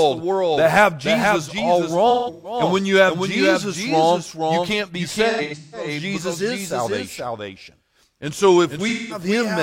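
The audio carries a doubled audio track throughout. A full-band copy about 5 dB quieter trails by roughly half a second. A slower second capture path or an edit holding two out-of-step copies is the likely cause. AAC frame loss with concealment appears at 2.10 to 2.59 s, 5.30 to 5.88 s and 8.88 to 9.21 s. The decoder filled the gaps from the last good spectrum, leaving smeared, noisy or phasey patches.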